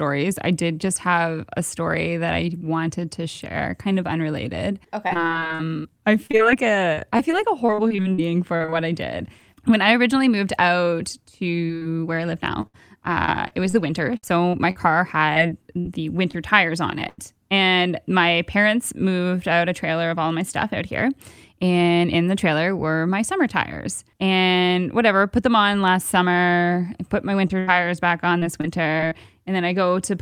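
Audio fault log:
5.07–8.74 s, repeated packet loss (robotic sound). About twenty short holes open in under four seconds, none longer than 42 ms. Each is patched by stretching the sound just before it. The patches keep coming, so the audio turns choppy and machine-like, with pieces missing.
11.66–11.71 s and 11.77–11.83 s, short concealed packet loss. Twice, about 40 ms fails to arrive. The receiver fills each hole by extending the preceding sound, then blends back into the real audio. Each sounds like a brief smear or wobble, and a short sound can vanish.
12.61–16.35 s, repeated packet loss (robotic sound). More than a dozen dropouts fall across this stretch. The longest runs to 67 ms. About a tenth of the span is filled with repeated material, which gives a stuttering, choppy texture.
17.09–17.20 s, burst of packet loss. About 80 ms is lost in one run. The last sound is held and turned down as the gap goes on, heard as a fading buzz or hiss. 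The audio then picks up further on, with that part gone.
27.48–27.51 s, short concealed packet loss. About 20 ms is missing and is patched from the sound just before it. It passes as a tiny smear or wobble.
27.59–27.69 s, burst of packet loss. About 80 ms drops out in a row. The held, fading fill replaces the real audio. Playback resumes past the hole.
28.39–29.13 s, repeated packet loss (robotic sound). Several short gaps, none over about 23 ms, recur within under a second. Each is bridged by repeating the prior sound, so the stretch sounds briefly choppy and robotic.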